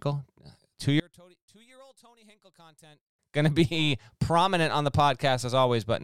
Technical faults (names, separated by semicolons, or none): one channel inverted